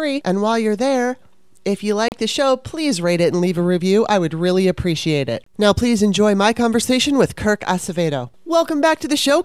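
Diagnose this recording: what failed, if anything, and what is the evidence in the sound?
The wireless playback link failed twice, most likely a Bluetooth stall: held-up packets let the headphone buffer run dry, so the speech cuts to silence for 35 ms at 2.08–2.12 s, after "you're there if you", and for 25 ms at 5.44–5.47 s, after "would really appreciate it", then resumes.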